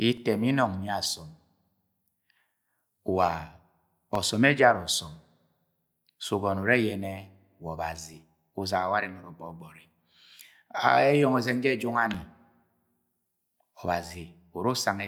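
Speech, interrupted by periodic USB or driver dropouts: from 0.17 s to 14.15 s, roughly every 2.0 s, a brief gap of around two milliseconds drops to silence, giving regular ticks over the voice. A waveform shows thin flat notches; a spectrogram shows narrow vertical broadband lines.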